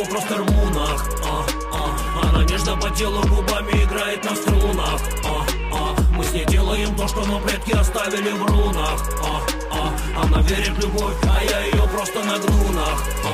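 The signal shows no technical faults at any point.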